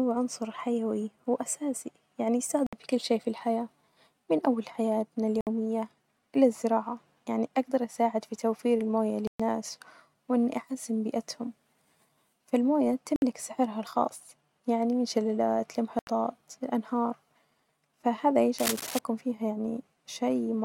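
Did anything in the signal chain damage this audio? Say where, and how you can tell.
Yes. Five Bluetooth dropouts point to the wireless playback link. The speech drops to silence at 2.67, 5.41, 9.27, 13.16 and 15.99 s. Gaps last 61, 61, 122, 61 and 81 ms. The speech then resumes as if it had played on. The lengths fit groups of lost 20 ms packets.

Cable scratch noise appears from 18.58 to 18.99 s. This is the analogue wiring. Dense, uneven bursts of scratching ride over the speech, only a little quieter than it. A worn cable or connector was likely moved, making its contact resistance jump rapidly.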